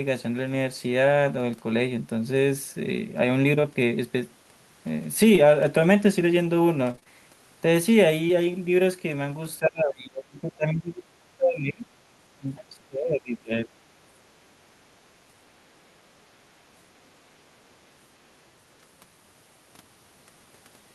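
At 3.61–3.65 s and 5.35–5.39 s the speech has short concealed packet loss: roughly 20 ms of audio never arrived, and the decoder bridged each hole by extending the preceding sound before fading back in, heard as a brief smear or wobble.

From 6.91 to 7.08 s, repeated packet loss gives a robotic sound. Four gaps, the longest 25 ms, fall in quick succession and about half the span is synthesised fill, so the speech turns choppy with fragments missing.

At 8.28–8.31 s, another 20 ms gap is concealed the same way, leaving a short smear.

Between 9.59 and 11.07 s, 11.37 and 11.89 s, and 12.35 and 13.71 s the speech dips sharply, by about 25 to 30 dB at its deepest. This is likely speech suppressed in double talk, with the echo canceller attenuating the talker while the far end was also active.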